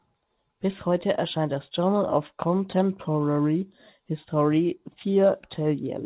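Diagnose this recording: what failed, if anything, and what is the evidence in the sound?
Nothing failed here; the call path is working normally.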